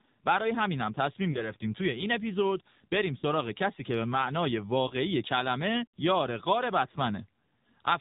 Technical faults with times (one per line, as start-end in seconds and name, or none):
0.00-8.01 AMR narrowband mobile codec
1.32-1.52 lost AMR speech frames
3.18-3.24 lost AMR speech frames
4.88-4.95 lost AMR speech frames
6.92-6.97 lost AMR speech frames